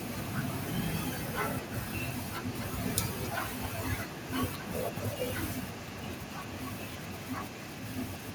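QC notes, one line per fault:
1.06 s to end: echo leak, speech repeated 265 ms later, roughly 15 dB quieter, likely loudspeaker pickup that an echo canceller failed to remove.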